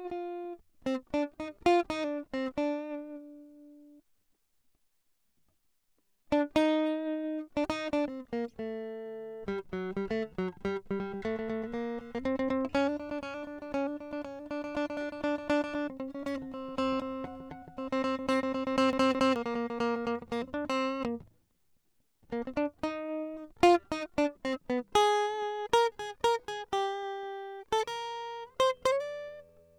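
At 18.93 s the music catches on a CD stuck on one turn, replaying the same 215 ms slice twice until 19.36 s, each jump marked by a brief mute. The even, rhythmic stutter points to a skipping disc, not an irregular dropout.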